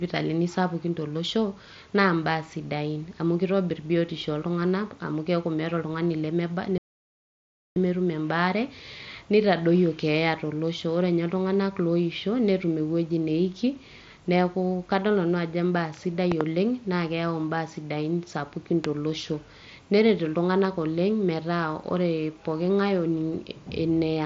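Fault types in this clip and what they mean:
Playback stall: The speech cuts to silence for nearly a second, from 6.78 to 7.76 s, then resumes. The player likely ran dry or was blocked.
Loud pop: Sharp pops about 15 dB above the speech, a pair at 16.32 s and one at 18.85 s after "imbaa sidain sapukin". These are likely voltage glitches.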